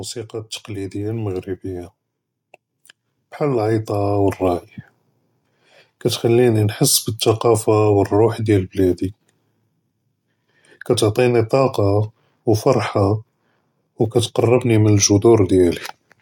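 From 0.3 to 1.98 s, then again from 3.39 to 4.46 s, automatic gain rising lifts the level by about 6 dB and about 5 dB as the control boosts a quiet input. Voice and background noise swell together, unlike a talker leaning closer, where only the voice grows.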